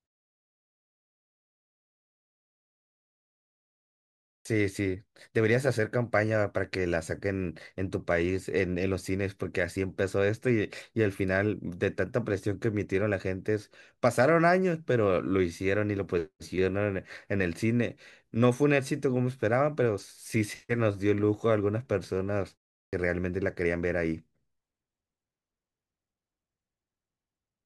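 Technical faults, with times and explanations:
4.38–4.45 s and 22.86–22.93 s, clipped start after a pause: the output device had dropped into a sleep state during silence (the opening 4.4 s, then a pause of only about 0.37 s) and needed time to wake, so roughly 72 ms and 68 ms of the returning speech were swallowed. Speech bursts in abruptly without its first sounds. On a waveform the envelope jumps from flat to full amplitude with no onset ramp; a spectrogram shows a hard vertical edge with onsets missing.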